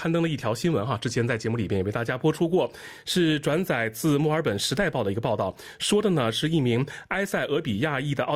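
No technical faults can be heard anywhere in the recording, and the signal keeps a steady, intact technical state throughout.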